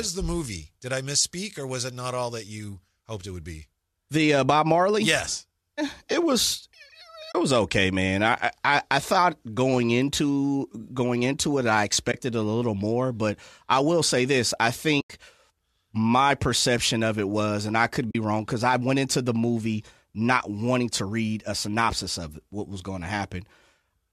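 The speech has four short dropouts from AAC frame loss with muting: 7.32 to 7.35 s (30 ms) just before "it was okay man", 12.12 to 12.14 s (20 ms) between "going into it I" and "a little more but", 15.01 to 15.10 s (90 ms), and 18.11 to 18.15 s (40 ms) between "was and I could" and "wrong because I went". At each point whole coded frames went missing, and the decoder substituted silence. Overlapping transform windows fade the sound down and back up, so each gap is a soft-edged hole. The durations fit runs of 10 ms frames, and the 90 ms gap is the longest. The underlying coding is light low-delay AAC, likely AAC-ELD at around 64 kbps.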